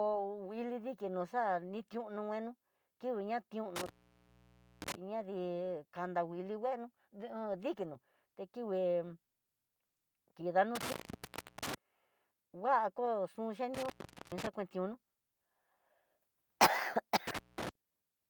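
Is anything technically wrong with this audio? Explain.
Yes. The speech drops out four times from an intermittent contact. A loose plug or cable briefly loses its connection, so the signal path opens and then closes again. Each cut starts and ends with crackle. Faint hiss remains while the line is open. The cuts fall at 3.76 to 4.95 s, with the signal gone for about 0.93 s, and at 10.75 to 11.75 s, for about 0.70 s. The next comes at 13.74 to 14.47 s, right after "ku xhu", for about 0.42 s. The last is at 17.27 to 17.69 s, for about 0.20 s.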